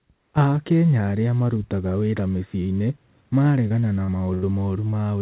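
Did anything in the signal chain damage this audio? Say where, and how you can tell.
Yes. The network stage dropped packets repeatedly from 3.68 to 4.44 s: four gaps, the longest about 83 ms, with concealment covering roughly a fifth of that stretch. Each hole is patched by extending the previous sound, so this repeated packet loss gives choppy speech with pieces missing.

A second, short concealed packet loss occurs at 4.90 to 4.94 s, where about 20 ms never reached the G.711 decoder in time. The receiver synthesised a continuation of the preceding sound and blended it back, heard as a brief smear or wobble.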